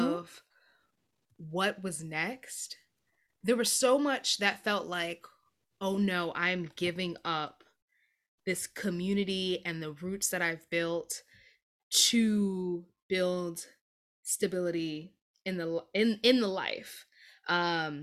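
No technical faults are audible.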